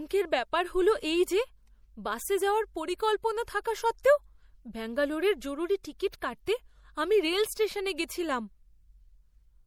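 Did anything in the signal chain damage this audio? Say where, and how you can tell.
Yes. The damage sits at the codec stage and runs through the whole speech clip: s sounds carry a metallic, chirpy edge, and the background has a watery swirl as weak frequency components flicker in and out between frames. Consonant attacks are smeared rather than crisp. This is most likely MP3 compression, with the encoder starved of bits, consistent with a bitrate of about 64 kbps.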